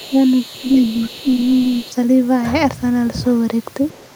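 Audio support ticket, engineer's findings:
Other side's voice leaking through, 0.00–1.93 s and 3.92–4.15 s. Faint second voice under the talker, roughly 25 dB down in the first stretch and fainter still at the end. Likely cause: residual echo left by the echo canceller after loudspeaker playback reached the mic. Distinguished from crosstalk or a bad mix by being a far-end voice sitting on top of the talker's level, not replacing it.

Speech suppressed in double talk, 0.08–0.16 s and 0.61–1.78 s. Talker's own voice ducks by around 10 dB, briefly at first and then for about a second, while the leaked far-end voice is active. Likely cause: the echo canceller failed to separate near-end speech from echo during overlap and attenuated both. Unlike packet loss, it tracks far-end activity.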